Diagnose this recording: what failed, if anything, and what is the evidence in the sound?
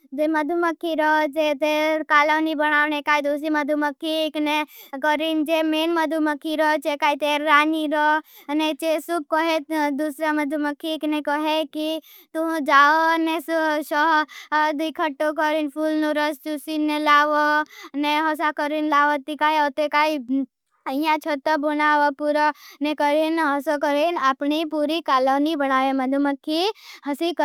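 Nothing in the speech signal points to a failure at any stage, from the analogue wiring and converter through processing, transmission, storage and playback.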